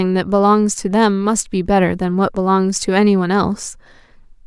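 No technical faults can be heard anywhere in this speech recording. Nothing interrupts, distorts or breaks up the sound at any point.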